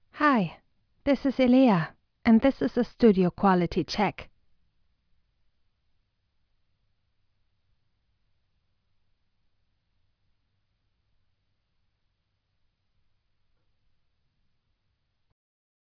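No technical faults are audible anywhere in this audio.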